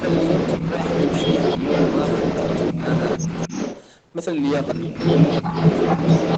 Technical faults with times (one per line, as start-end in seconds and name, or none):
0.00-6.37 hard clipping
0.00-3.92 echo leak
0.60-0.66 speech suppressed in double talk
2.74-2.84 speech suppressed in double talk
3.48-3.55 speech suppressed in double talk
4.64-6.37 echo leak
4.74-4.95 speech suppressed in double talk
5.42-5.54 speech suppressed in double talk